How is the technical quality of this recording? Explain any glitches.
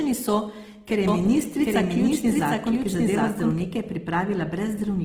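Technical quality is poor, with two audible faults: coding damage throughout and a doubled track in the middle.

Across the whole recording there is plainly audible Opus compression damage. The speech sounds grainy and rough, with a noisy edge on voiced sounds. This fits Opus in its music mode at a low bitrate around 16 kbps, where starved bands are filled with folded or noise-like content instead of being left empty. Content still reaches about 20.4 kHz, so it is roughness rather than muffling.

From 1.08 s to 3.60 s a doubled audio track appears. A second, full-band copy of the speech runs roughly 0.7 s behind, at about the same loudness, with no reverberant tail. It starts and stops abruptly at those points. The likely cause is a late second capture path or an edit that left two offset copies.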